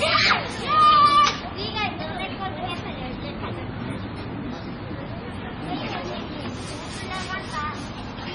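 Throughout, likely heavy MP3 compression near 24 kbps cuts everything above 10.3 kHz and drops weak components, so the sound turns watery with smeared attacks.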